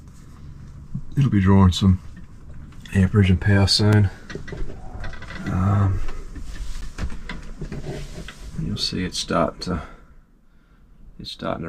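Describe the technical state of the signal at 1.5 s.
At 1.5 s the signal is intact, with no dropout, distortion, glitch or other audible fault.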